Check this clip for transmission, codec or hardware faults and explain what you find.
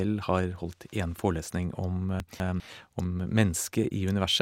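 One transmission fault is present: chunks out of order between 2.2 and 2.6 s. A 200 ms chunk of the speech arrived one chunk late and was played after the chunk that should follow it, so the two swap places. Nothing is lost, but the order is wrong at three hard joins and that moment sounds jumbled.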